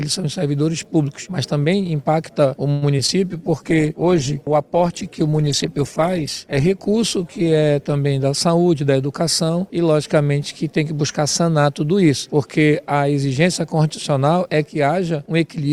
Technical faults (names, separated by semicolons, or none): call audio freeze; short concealed packet loss; call bitrate drop; jitter buffer speed-up